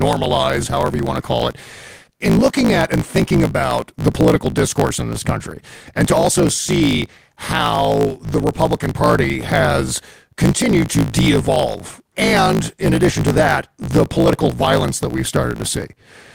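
A speech recording with a block size mismatch (truncated) running from start to finish. You can hear a steady buzz at about 54.4 Hz under everything, and the talking races along at roughly 1.16 times normal speed while the timbre stays about where it should be. One stage is writing bigger blocks than the next one reads, so the tail of every block gets dropped. The buzz rate fits blocks of 1024 samples being cut short.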